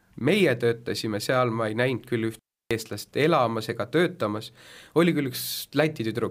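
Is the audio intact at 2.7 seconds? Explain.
No, 2.7 s falls right at the tail end of an intermittent contact dropout that runs from about 2.34 to 2.71 s, between "ma ei näinud küll" and "eestlast elamas ega töötamas". A loose cable or plug briefly loses its connection, so the speech cuts out for roughly 314 ms. You get a crackle as the contact breaks and remakes, with faint hiss in the gap. The signal comes back only at about 2.71 s.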